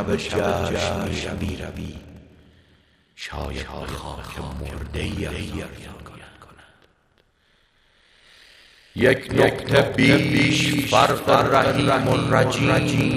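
From start to finish, the sound is heard twice. A doubled audio track sits under the original, trailing by about 0.3 s. The late copy is roughly 5 dB quieter but carries the full frequency range. It has no decay and no room colour, so it reads as a clean, detached repeat rather than an echo. The likely cause is a second capture through a slower path being mixed back in.

A block size mismatch (padded) also runs through the whole clip. One stage writes shorter blocks than the next one reads, which fits 1024-sample blocks being written. The leftover space in each block is filled with silence. Those tiny gaps repeat at 38.3 Hz, producing a steady low buzz. The padding also stretches the audio, so it plays at 0.889 times normal speed while the timbre stays the same.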